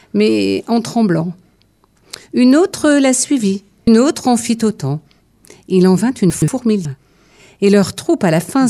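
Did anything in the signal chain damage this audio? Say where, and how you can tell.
Yes. Compressed frames are skipped at the codec or storage stage, at 3.87 s and again at 6.85 s. The sound jumps forward about 0.3 s, then about 0.4 s. That suggests roughly ten and fifteen whole 26.1 ms frames dropped.

Chunks are out of order between 6.30 and 6.48 s, pointing to a network or buffering stage. A 60 ms chunk arrives two chunks late and plays after the ones that should follow it. Nothing is lost, but the order jumbles, with three hard joins.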